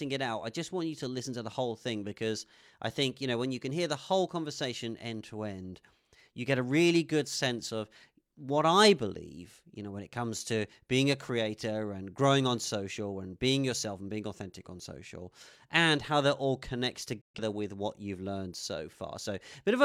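From 17.21 to 17.40 s, a digital broadcast dropout mutes the speech. The receiver lost a few frames and faded out within 3 ms, leaving a flat waveform and a blank spectrogram gap.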